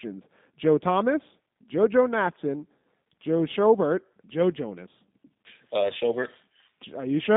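G.729 codec damage runs through the whole speech clip, and its character fits the 8 kbit/s G.729A variant. Each 10 ms frame of speech is rebuilt from a vocal tract filter, a pitch predictor and a few pulses rather than the original waveform. That gives the speech its rough, slightly synthetic quality, which is plainly audible here. The band is narrowed to roughly 150 Hz to 3.7 kHz, with nothing above 3.8 kHz, so the sound is dull and telephone-like.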